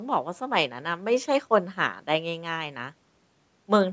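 Nothing is technically wrong with this speech clip; it has simply passed through a call's microphone processing, which leaves no content above 8 kHz.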